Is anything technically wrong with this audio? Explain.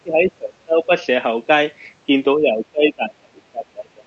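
Yes, there's speech suppressed in double talk, from the start to 0.92 s and again from 2.39 s to the end. The speech sinks by up to about 25 dB, likely because the echo canceller could not separate this side's talk from the loudspeaker echo and ducked both.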